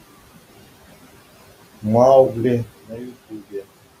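Noise suppressor artifacts run through the whole clip: steady room noise, about 20 dB below the speech, is pulled down by about 16 dB between words and returns underneath them. A sudden gain jump at 2.69 s drops the speech and background together by about 12 dB until the end, likely a digital gain change applied without a ramp. Speech cut by the noise suppressor follows at 2.88–3.13 s and 3.30–3.63 s, where the suppressor mistakes quiet speech for noise. It pulls parts down by up to about 11 and 12 dB, roughly a tenth of a second each, so they sound swallowed.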